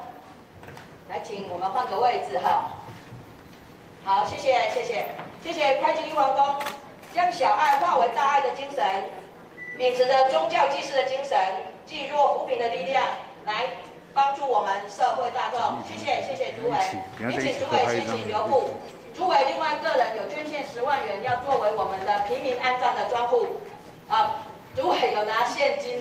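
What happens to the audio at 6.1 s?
Nothing goes wrong at 6.1 s; the audio plays through that moment intact, with no dropout, click or other disturbance.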